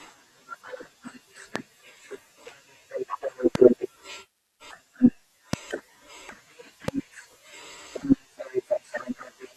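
Loud pops at 1.56–1.58, 3.55–3.58, 5.53–5.56 and 6.88–6.90 s, each a single sharp thump about 20 dB above the speech, the last nearer 15 dB. A brief voltage step, likely from static or a switch or driver glitch, adds to the signal while the speech continues underneath.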